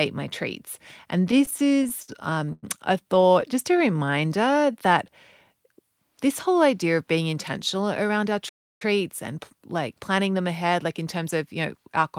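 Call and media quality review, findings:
Repeated stalls (stutter), 1.31–2.65 s and 3.15–3.43 s: jitter buffer underruns, packets arriving late. First span has 15 gaps (longest about 100 ms, 22% concealed), second 5 gaps up to 11 ms. Gaps are filled with continued sound, not silence, and nothing is lost.

Jitter buffer slow-down, 3.72–5.12 s: receiver rebuilding its reserve by repeating pitch periods, adding 158 ms. Plays at 89% speed with pitch unchanged. Sounds are drawn out smoothly rather than broken up, which distinguishes it from stutter.

Jitter buffer speed-up, 7.32–10.69 s: excess buffered audio trimmed by dropping short pitch-period pieces, roughly 200 ms removed. Runs at 106% speed, same pitch, and sounds hurried. Unlike a resampling fault, it produces no pitch shift.

Playback stall, 8.48–8.82 s, inside the speed-up span: output goes fully silent for 317 ms, then resumes. Likely cause is player data starvation or a blocked playback thread. 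It is true silence, not concealed fill, unlike the stutter.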